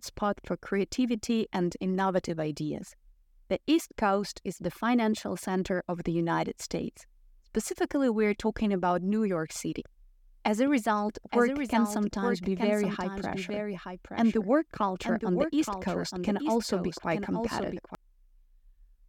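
Speech with a doubled audio track from 10.67 to 17.95 s: a full-band copy trails about one second behind, roughly 5 dB quieter, and cuts in and out abruptly. Unlike an echo, it has no decay or room colour, likely from a second, slower capture path.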